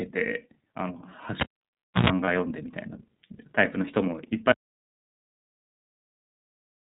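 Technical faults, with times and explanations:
Throughout: iLBC codec, plainly audible. Speech is band-limited below 4 kHz with a rough, synthetic edge, consistent with a 30 ms-frame mode near 13.33 kbps.
1.40–2.10 s: cable pulled and plugged in. A pop, about 0.65 s of near silence, a 0.11 s burst of 60 Hz mains buzz as the tip touches, then another pop.
2.25 s: lost iLBC frames. One 30 ms frame is missing, and the decoder fills it by repeating the last pitch cycle with noise, giving a brief held, buzzy sound before recovering.
4.52 s to the end: audio dropout to silence. The speech cuts off mid-flow into silence with no room tone, most likely from a lost input leaving the recorder writing silence.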